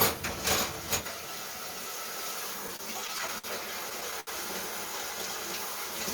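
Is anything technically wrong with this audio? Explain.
Yes. Repeated stalls (stutter) at 2.67–3.46 s and 3.90–4.29 s: late packets drained the jitter buffer, so brief repeated fills (longest about 69 ms) make the audio drag, showing as smeared, stretched segments on a spectrogram.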